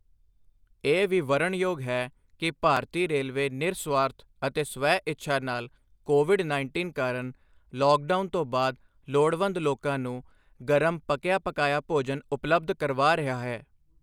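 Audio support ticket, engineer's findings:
Block of digital silence at 2.77 s, speech clip. Sharp tick between "ਵੀ ਵਰਨਣਯੋਗ ਹੈ ਕਿ" and "ਰੇਲਵੇ ਨਿਰਸੁਆਰਥ ਅਤੇ". Dropout lasts about 2.9 ms, which fits a 128-sample buffer. Probably the playback or processing callback didn't fill the buffer in time, so it output zeros. The cut has no fade in or out, and the hole is short enough to merge into one tick.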